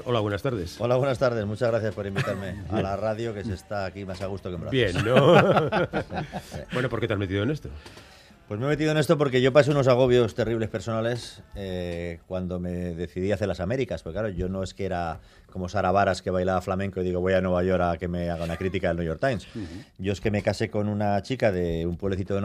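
No technical faults can be heard anywhere in the audio.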